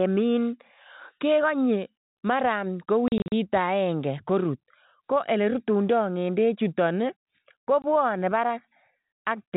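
Packet loss filled with silence hits first between 3.08 and 3.32 s: about 140 ms of audio drops out in short holes spread across 240 ms, the longest only 40 ms, so the speech stutters. A single 20 ms hole follows at 7.82 to 7.84 s. Lost packets were replaced by silence rather than concealed, leaving hard-edged holes. The gap lengths fit 20 ms packets carrying G.711 telephone-band audio.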